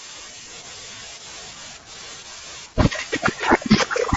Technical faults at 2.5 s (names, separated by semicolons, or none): none